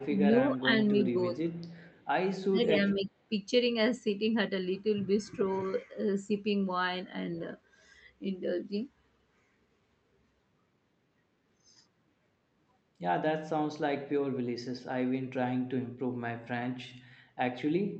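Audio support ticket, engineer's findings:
Speech dips in short pieces at 0.55–0.7 s, 1.31–1.37 s, 2.49–2.74 s and 2.94–3.3 s, dropping by about 5 to 20 dB. Likely speech suppressed in double talk: the echo canceller mistakes overlapping far-end audio for echo and attenuates the near talker.

Faint delayed copy of the speech, trailing by 294 ms, at 1.06–1.11 s, 1.53–2.05 s and 2.63–2.71 s, about 20 to 35 dB below the direct sound. Likely echo leak: far-end loudspeaker pickup incompletely cancelled and returned to the talker.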